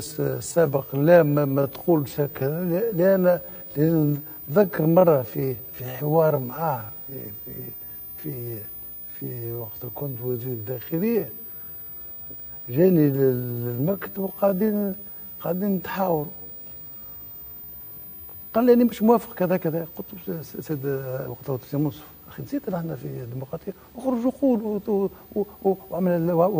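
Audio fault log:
0.0 to 18.62 s, time-stretched section: the audio runs at 0.625 times its normal pace while the pitch stays where it was, so it drags, as short pieces repeat to fill the extra length. The likely cause is software stretching this stretch to fit a longer slot. Unlike a slowed playback rate, nothing drops in pitch, and the pace jumps back to normal abruptly at 18.62 s.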